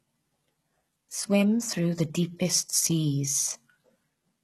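Throughout the speech, the treble is rebuilt from lower bands, likely by heavy HE-AAC compression, so s sounds turn gritty and lispy, with nothing above 12.3 kHz.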